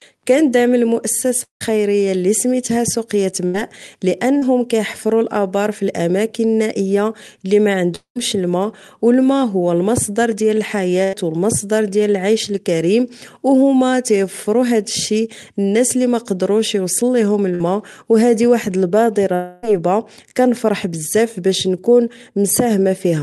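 Repeated packet loss (robotic sound) runs from 1.43 to 4.44 s in this speech recording, ending just before "كيحفرو أبار فالأماكن النائية". Three separate gaps, the longest 171 ms, were each papered over by stretching the preceding sound, so the passage turns choppy and machine-like with short pieces missing. A long network dropout appears at 7.96 to 8.18 s and again at 19.35 to 19.65 s. In both, the sound is drawn out into a decaying buzz or hiss across the hole, about 200 ms and 280 ms respectively, and the first one sinks into silence for its last 100 ms or so. This pattern is likely the result of a stall in which no audio arrived and the receiver could only extend the last sound until the stream came back. Bursts of packet loss occur at 11.04 to 11.15 s, right after "الماء هو المصدر ديال", and at 17.55 to 17.62 s, between "لي ميقدروش يوصل ليهم" and "أو هذه واحد". Each loses roughly 100 ms and 60 ms of sound, which the receiver fills by holding and fading the previous sound into a short buzz or hiss before resuming further along. 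Underneath all of this, the call codec trims the top end to about 12 kHz, which fits Opus running at a moderate bitrate.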